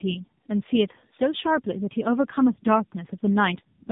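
Tandem speech coding runs through the whole clip. The speech passed through two low-rate speech codecs in a row. The second re-encoded the first one's already damaged output. The result sounds rough, muffled and warbly, with nothing above 3.7 kHz.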